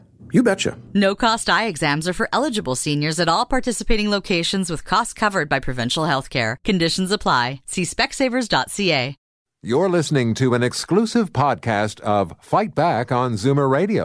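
Nothing in this recording stands out as a technical fault: the speech runs along without any dropout, click, glitch or other disturbance catching the ear at any point.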